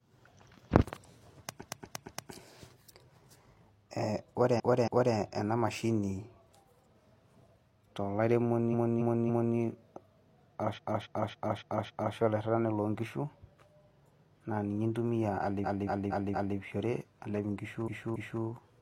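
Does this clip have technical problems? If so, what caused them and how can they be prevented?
Yes. Repeated frames: runs of compressed speech, each about 0.23 or 0.28 s long (which fits blocks of five or six frames), were written or sent again. The decoder replays each block two to five extra times, so the sound stutters at 1.58–2.28, 4.55–5.11, 8.69–9.52, 10.73–12.12 (just before "olairrirrani lonkishu"), 15.61–16.54 and 17.84–18.39 s, and the audio grows longer by each replayed stretch. Checking frame sequence numbers and discarding duplicates before decoding would prevent it.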